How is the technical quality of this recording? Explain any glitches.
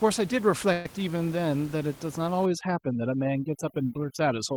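The recording has two clear glitches: a brief stall early on and heavy-handed noise removal in the second half.

From 0.72 to 0.86 s there is a call audio freeze. The sound stalls for about 130 ms and the last sound stretches into a fading buzz or hiss. This is likely from delayed packets draining the jitter buffer. Playback then resumes where it stopped. Nothing is lost, but everything after runs about 130 ms late.

From 2.46 s to the end, overdone noise removal takes hold. The room noise sits about 20 dB below the speech. Here the reducer mutes frequency bands near its noise estimate, taking quiet parts of the voice with them. The background drops and breaks up into twinkling specks.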